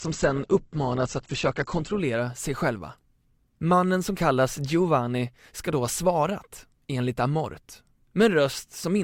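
Adaptive stream starting at a low bitrate, from 0.0 to 2.0 s: the opening speech has nothing above 8.1 kHz and heavier codec artefacts, which fits roughly 12 kbit/s Opus, until the player measures the connection and steps up, likely to 64 kbit/s, with a sudden, gapless gain in clarity.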